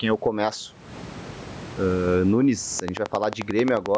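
A short speech clip with gain pumping all the way through: the gain swings by something like 20 dB with each loud stretch, most likely a fast limiter reacting to mic gain set far too high. From 2.80 to 3.96 s there's a train of clicks, about fifteen evenly spaced ticks at 11.3 per second, sticking out around 15 dB above the speech, likely interference from nearby gear or a faulty connection.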